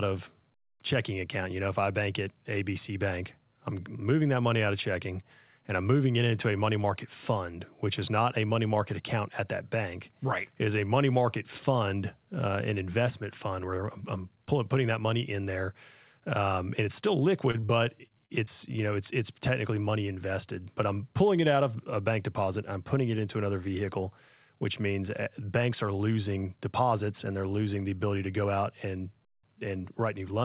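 Right after "and it's still", short concealed packet loss hits at 17.51, 17.60, 17.66, 18.08, 18.26 and 18.44 s, each about 30 ms, before "you know it's it's". The receiver papers over each gap by extending the last sound, so you hear quick smears and wobbles through the narrowband 4 kHz call audio.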